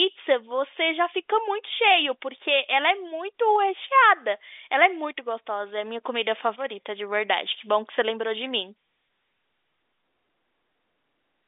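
Speech over a standard G.711 telephone line, passing roughly 250 Hz to 3.6 kHz with nothing above 3.8 kHz, and no faults to report.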